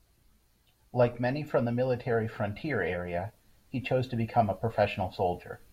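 There are no technical faults to describe at any point in the clip.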